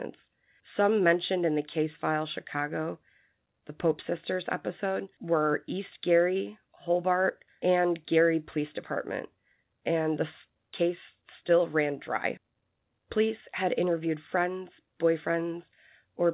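Nothing's technically wrong with this speech recording: it's just come through a call path whose sound stops at about 4 kHz, which fits an ordinary narrowband phone codec like G.711.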